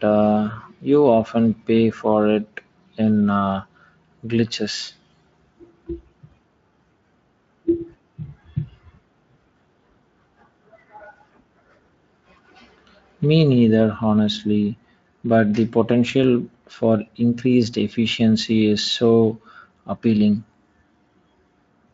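Speech, with no technical faults to report.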